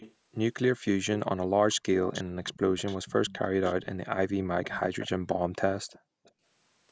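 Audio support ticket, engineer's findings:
Echo leak: far-end speakerphone echo canceller likely not removing loudspeaker pickup, so a delayed copy of speech returns. Heard at 0.0–0.14 s, 2.05–3.86 s, 4.63–5.09 s, and 5.9–6.31 s. Delay grows from 360 ms to 377, 388 and 395 ms. Level about 20 dB, then 15, 15 and 30 dB under the direct speech.

Background gated by the echo canceller: canceller suppressing the microphone hard while its loudspeaker plays. Room sound dips up to about 40 dB at 5.15–5.56 s and 5.99–6.34 s, roughly 0.3 s of dropout each, then returns on release. The second dip overlaps the last echo scrap. The sound stops at 8 kHz, which is consistent with normal call microphone processing.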